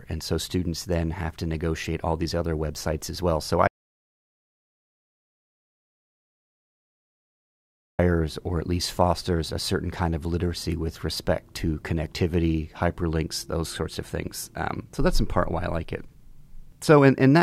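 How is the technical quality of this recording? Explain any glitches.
There's one real problem: an audio dropout to silence from 3.67 s to 7.99 s, roughly 4.3 seconds of dead air. The speech cuts off mid-flow into silence, no room tone at all, then snaps back at "or at least fosters". Likely the input was lost while the recorder kept writing silence, so that stretch of speech is gone.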